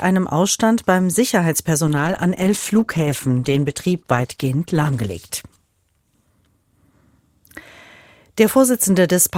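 From 1.88 s to 7.48 s a call bitrate drop takes the encoder from 96 kbps to 15 kbps, bottoming out for about 3.3 s. Coarser coding and lost high frequencies make the audio sound rough and muffled until recovery.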